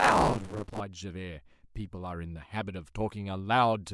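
From the start to 0.8 s, the speech carries a steady robotic buzz at 100 Hz. This is buffer tearing. The software filling the ring buffer and the hardware draining it have drifted out of step with each other. So they cross inside every 10 ms period. Roughly half of each period replays audio from about 40 ms earlier. Hard joins sit on both sides of it. That rattle exists only while sound is present.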